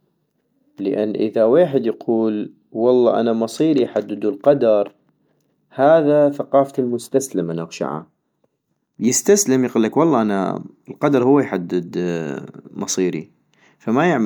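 Repeated lossy coding, likely an MP3 chain at around 128 kbit/s run about three times, leaves generation loss across the whole speech clip. Each re-encode quantises on a shifted frame grid, so the sound turns swirly, smeared and hollow, with blurred attacks, though content reaches 20.1 kHz.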